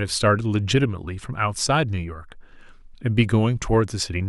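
No technical faults are audible anywhere in the recording.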